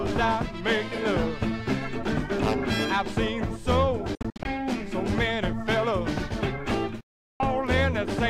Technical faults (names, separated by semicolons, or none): Bluetooth dropout